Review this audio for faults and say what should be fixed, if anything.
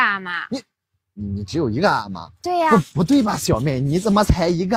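Nothing in this audio needs fixing. No faults can be heard at any point in the recording.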